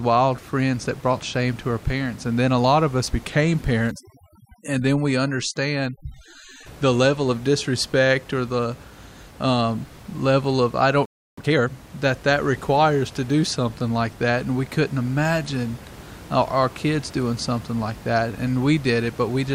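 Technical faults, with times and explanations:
3.91 to 6.66 s, overdone noise removal: after "lot of us became" and until "the level of disrespect", the noise reducer is set too aggressively. Bands sitting near its noise estimate are pulled down hard, taking quiet speech detail with them, so the background drops and breaks up into twinkling specks.
11.05 to 11.38 s, playback stall: just after "um level of I" the output drops to silence for about 320 ms. This gap mid-flow is likely the player running out of data or having its thread blocked, with output resuming only once it recovered.
11.38 to 11.70 s, time-compressed catch-up: immediately after the stall, leading into "that that requires to", the player works off its backlog by cutting and cross-fading short segments at roughly double speed. Pitch stays normal, but the speech sounds rushed.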